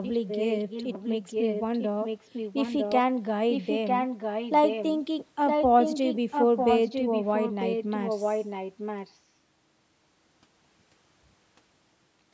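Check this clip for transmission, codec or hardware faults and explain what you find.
An echo leak runs through most of the speech. A faint delayed copy appears at 0.03–0.11 s, then much stronger copies at 0.27–2.96 s, 3.51–4.98 s and 5.47–9.19 s. The likely cause is a loudspeaker echo canceller letting through a copy lagging 950 ms behind the voice. In the spectrogram, fainter duplicate harmonic patterns sit shifted right; the waveform shows smeared, overlapping envelopes. The speech band itself stops at 8 kHz.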